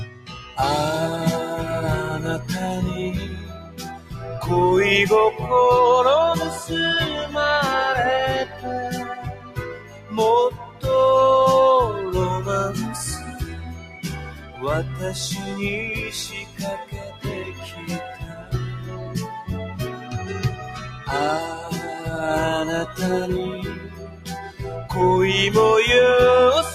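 A speech-style noise suppressor has been left running on non-speech material, and you can hear it working against the sound the whole way through. Because it treats anything steady, ambient or reverberant as noise, the gain keeps riding up and down by around 15 dB, so held parts and decays sag while sharp onsets punch through. The result pumps and thins out rather than sitting at a stable level. On top of that, there are clear spots where the noise suppressor cut the sound hard, pulling steady or fading material down by about 8 to 12 dB. That happens at 0.04–0.57 s, 3.3–4.2 s, 8.45–8.65 s, 9.27–10.84 s, 13.18–14.63 s, 16.36–19.15 s (the longest, a couple of seconds of affected sound), 19.97–21.09 s and 23.74–24.61 s. The deepest dips, about 12 dB, are at the start and around 9.3–10.8 s. Those stretches sound hollowed out, with tails clipped short.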